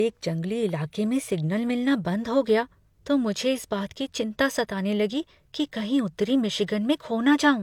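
Throughout the speech, the detail sounds smeared and thin in the way a heavily compressed encoding does, and nothing sits above 20.2 kHz. This is likely low-bitrate audio saved at a high bitrate, consistent with HE-AAC near 48 kbit/s re-encoded as MP3 around 195 kbit/s, which cannot restore what was lost.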